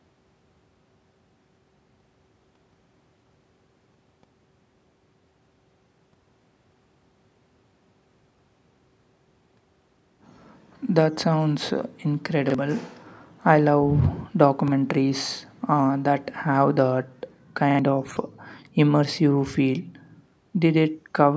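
Short stutters at 12.50 s, 14.68 s and 17.71 s (the last repeating twice) are repeated buffers: late audio made the device replay the same 43 ms chunk, which fits a 2048-sample buffer.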